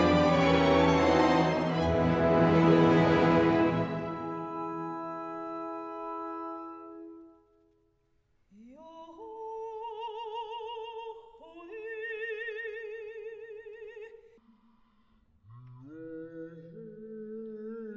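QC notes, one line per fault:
14.38–17.97 s, wrong sample rate: from here to the end the samples are played back at half the rate they were captured at, which fits 32 kHz material played at 16 kHz, so the sound runs at half speed and drops a full octave, 12 semitones, turning low and dragging.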